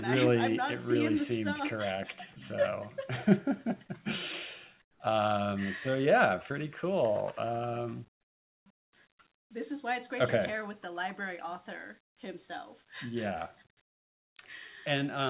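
Audio through a narrowband call path, with nothing above 4 kHz. Comfort noise in place of the background occurs at 4.82–5.0 s, 8.21–8.66 s and 8.78–8.93 s. Flat, featureless hiss replaces the real background, about 10 to 27 dB quieter. The cause is likely discontinuous transmission in pauses.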